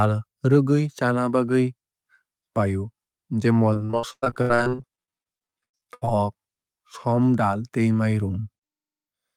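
From 3.73 to 6.09 s the speech breaks up with repeated packet loss, giving a robotic sound. Audio data keeps arriving late or not at all. Each hole is patched by stretching the last stretch of sound forward. About thirty short holes follow one another, the longest 93 ms. Patched sound fills roughly 37 percent of the span. The speech turns choppy and robotic, with small pieces missing throughout.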